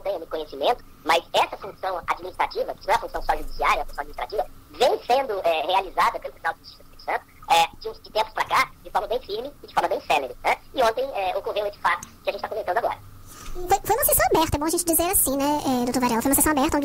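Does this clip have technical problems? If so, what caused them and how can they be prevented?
Yes. The whole clip has a wrong sample rate fault. Everything runs 1.5 times too fast, and pitch rises by about 7 semitones, a perfect fifth. Speed and pitch shift together by the same ratio. That points to audio captured at 32 kHz being played back at 48 kHz with no rate conversion. Each sample simply goes by faster. To prevent it, resample to the playback rate or tag the file with its true rate.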